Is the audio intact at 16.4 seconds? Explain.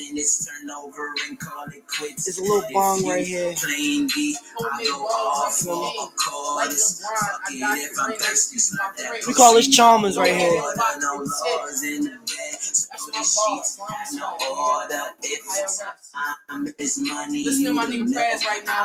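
No. A speech-tuned noise suppressor left on throughout treats steady tones and decaying tails as noise, so the sound pumps and thins, swinging by around 5 dB. From 16.36 to 16.51 s, the noise suppressor cut this sound as noise, pulling it down by about 15 dB at its deepest, so it sinks in level.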